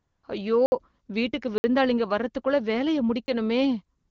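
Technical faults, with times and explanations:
0.00–0.23 s and 3.97–4.11 s, AMR comfort noise: At both ends the phone treated the line as silent and stopped sending speech frames, for about 234 ms at the start and 136 ms at the end. The receiver filled those gaps with synthetic noise built from a rough sketch of the background's level and spectrum. You hear a smooth, steady hiss that switches over to the real background just before "அய்யோ வீட்டுக்கு" comes in, and switches back again at the tail.
0.66–0.72 s, 1.58–1.64 s and 3.26–3.28 s, blocks of digital silence: Three chunks of samples were replaced by zeros, likely because the output buffer wasn't filled in time. The first two are 60 ms holes, the second sitting between "அய்யோ வீட்டுக்கு" and "வரதுக்குள்ள வேலைய". The third is only 20 ms, right after "வரதுக்குள்ள வேலைய", so it's a short hole. There's no fade at any edge, so each dropout cuts out and back in abruptly, even through the light AMR-WB coding at 12.65 kbit/s.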